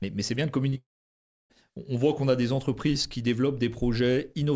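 Right around 0.70 s there's a short concealed packet loss, then another straight after, at 0.74 to 0.78 s. About 20 ms went missing each time, and the receiver papered over it by stretching the previous sound, so you get a quick smeary wobble.

From 0.78 to 1.52 s it turns into what is likely a long network dropout. Roughly 0.72 s never arrived. The concealment buzz or hiss fades out fast and leaves about 0.64 s of silence. Then the audio picks up again further along, with that chunk simply gone.

Between 1.70 and 2.23 s there's a drift correction step, most likely clock-matching software changing the playback rate in one step. Everything slows by about 5.3% and drops about 94 cents, so it sounds nearly a semitone flat until it snaps back. The call path has nothing above 8 kHz, which fits a wideband call codec.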